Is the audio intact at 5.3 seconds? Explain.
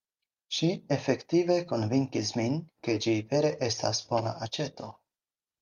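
Yes, at 5.3 seconds the speech runs cleanly, with no dropout, click, distortion or other fault to be heard at that moment.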